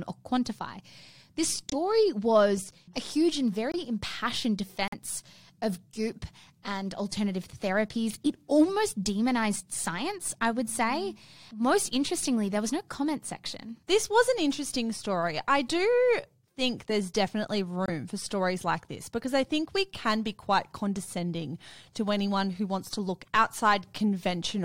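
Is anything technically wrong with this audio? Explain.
Yes. There are four corrupt frame muted dropouts in the speech, at 1.70 to 1.74 s, 3.72 to 3.75 s, 4.88 to 4.94 s and 17.86 to 17.90 s. In each, the decoder rejected damaged compressed frames and the player substituted silence. Each gap starts abruptly and lasts about 40 to 65 ms, roughly one or two frames long, while timing stays intact.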